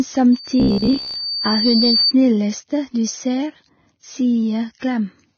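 A speech clip with hissy, grainy treble, roughened tones and blurred attacks throughout: the damage is heavy and most likely comes from Vorbis compression at a very low bitrate, around 16 kbps, where the treble is cut off and quantised so coarsely that fine detail turns into noise. From 0.32 s to 2.13 s a loudspeaker feedback squeal appears as a single tone at 4.6 kHz, swelling over about a second and a half until it is roughly as loud as the speech. It arises when the microphone picks up its own loudspeaker and the loop gain at that frequency exceeds one. Between 0.60 s and 1.15 s the sound turns into a rigid, metallic buzz at 66.8 Hz, a robotic sound from repeated short buffers. It is likely caused by audio arriving too seldom, with about half of it filled by repeating a slice of roughly 15 ms while real audio is skipped. At 4.78 s a short hiss of about 37 ms precedes a sharp attack, which sounds smeared. 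This pre-echo occurs when the codec spreads noise sized for the loud onset across the quiet moment before it.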